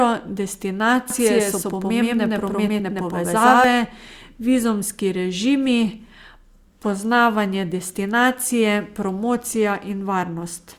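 A speech recording with a doubled audio track from 1.10 s to 3.64 s. Across that stretch a second full-band copy of the same audio runs about 100 ms behind the original at roughly equal level, giving a flat, slapback-like repeat with no decay or room colour. The copy switches on and off abruptly at both ends. The likely cause is the signal being captured twice, once through a slower path, or an edit leaving two copies out of step.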